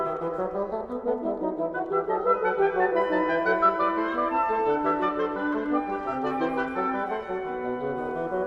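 Nothing goes wrong anywhere in this one, so there's no fault to walk through.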